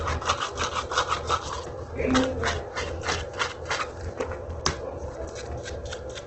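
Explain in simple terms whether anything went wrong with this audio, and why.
Yes, two things went wrong, and both last the whole clip.

The first is a filter restarted on every block. A processing step forgot its settings every few hundredths of a second and started over each time, so each restart adds a tiny tick. Those ticks merge into a low buzz of about 43 per second, which fits a 1024-sample block. Unlike mains hum, this buzz gets louder and quieter with the sounds and drops away when they do.

The second is heavy compression damage, most likely from Opus compression squeezed very hard. The sounds come across rough, grainy and noisy, and everything above about 8.2 kHz is missing, so they lack crispness. Unlike MP3 damage, there is little swirling or bubbling, just a coarse, sandy texture.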